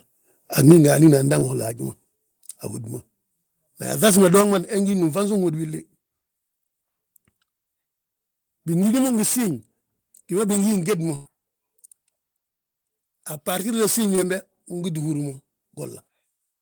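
At 0.68 to 0.72 s a loud peak in the speech breaks up with a harsh, crackly edge. This is microphone overload, most likely from an input level set too high: the peak runs about 2 dB past what the converter can represent, and about 15% of the samples in that stretch are flattened at the limit. The clean waveform tops are squared off, which gives a gritty buzz rather than simple loudness.

Right after it, at 0.72 s, the microphone volume is stepped down by about 4 dB. The speech and the background fall together in one clean drop with no distortion of their own. Two more steps of about 5 dB each follow, at 1.71 s and 4.41 s. Because the whole sound gets quieter at once and stays there, this is likely a gain change at the source, not a fault in transmission.

A short concealed packet loss at 1.39 to 1.43 s replaces 20 ms of audio with a continuation of the preceding sound. It is heard as a brief smear or wobble before the real signal blends back in. 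The same happens at 4.91 to 4.95 s, just before "ngi nfansuŋ hódi willi", and at 14.15 to 14.19 s, just after "a bartirdo siñi". Each gap is too short to sound like a dropout, so only a momentary blur gives it away.

The burst of packet loss at 11.15 to 11.27 s, just after "géd mo", is longer. About 100 ms of speech never arrives, and the receiver covers the gap with roughly 100 ms of synthesised sound that continues the last sound and fades as it goes, with no silent hole. It sounds like a held buzz or fading hiss, and then the speech resumes further along with a piece missing. The length and the audible fade set it apart from the short concealments, which are over almost before they can be heard.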